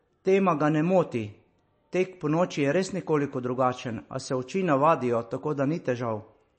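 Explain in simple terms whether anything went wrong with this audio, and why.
Something did go wrong, and it runs through the whole recording from start to finish: the speech carries plainly audible damage of the kind left by MP3 compression, which is the likely cause. To save space, the encoder threw away everything above about 8.3 kHz, so the speech loses its crisp top end and s sounds turn dull. With so little data to work with, it also dropped fainter detail that flickers in and out, giving a watery, swirly quality.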